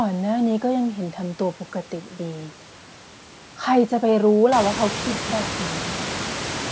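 No technical faults are audible anywhere in this speech.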